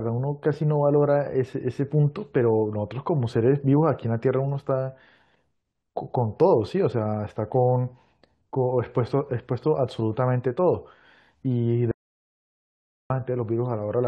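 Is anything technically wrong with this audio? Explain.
Yes. The input was likely lost from 11.91 to 13.10 s while recording continued, writing silence: an audio dropout to silence, cutting the speech to 1.19 s of dead silence without room tone.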